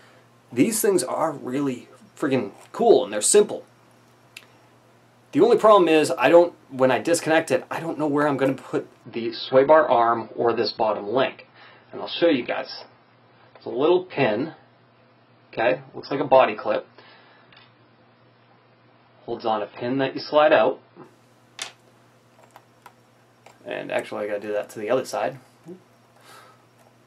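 From 9.04 to 21.04 s the sound abruptly loses everything above 5.5 kHz and gains codec smearing, which fits an adaptive stream switching to a lower bitrate, around 16 kbit/s. Unlike a dropout, there is no gap, and quality snaps back just as suddenly.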